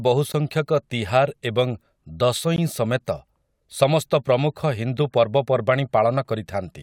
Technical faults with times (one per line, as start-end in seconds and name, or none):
0.32 gap at a join of encoded pieces
2.56 gap at a join of encoded pieces